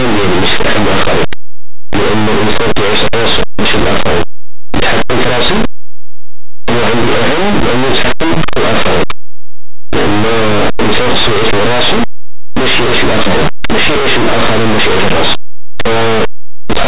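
From the very start to the end, the speech carries a loud, harsh distortion: a coarse, crackling roar that never lets up. This is linear audio read as companded. Samples stored as plain linear 8-bit values were expanded as if they were mu-law codes. Small values just to one side of zero became the loudest outputs, while their counterparts on the other side stayed small, tearing the waveform apart.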